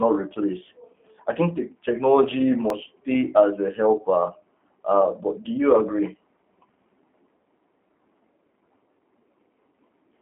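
Throughout, the speech carries G.729 codec damage. The sound is rebuilt from a filter and sparse pulses at what sounds like 8 kbit/s, leaving a rough, synthetic edge, with a line band of 250 Hz to 3.4 kHz. A spectrogram shows empty space above 3.5 kHz.

At 2.70 s, between "I think the technology" and "stay as a helper", audio is missing between chunks. A few milliseconds vanish, and the two sides butt together as a tiny skip, likely where the recorder closed one chunk and opened the next. The waveform shows an abrupt splice with no silent gap.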